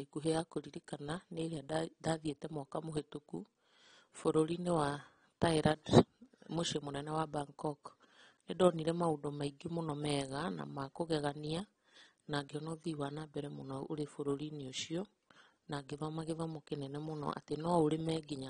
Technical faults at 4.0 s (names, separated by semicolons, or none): AAC compression